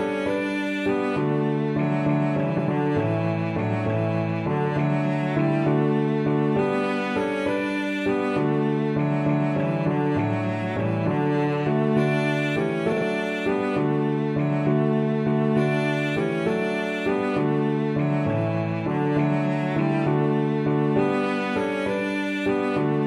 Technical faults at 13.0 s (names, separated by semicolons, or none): frames out of order